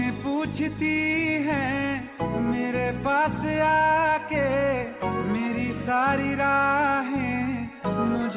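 No technical faults can be heard anywhere in the audio.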